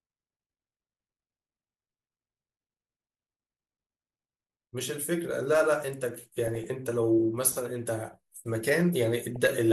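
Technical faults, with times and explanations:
Throughout, MP2 compression: an MPEG Layer II encoder short of bits, likely running at about 80 kbps, switches off upper sub-bands and quantises the remaining ones coarsely, so the speech sounds dull and carries a plainly audible gurgling, granular texture.
6.44–6.64 s and 9.36–9.50 s, DAB burbling: bit errors at a few tenths of a percent slip past error correction into the MP2 data and corrupt samples across a run of frames. Wrong samples then put short blips of noise into single sub-bands, giving brief burbling.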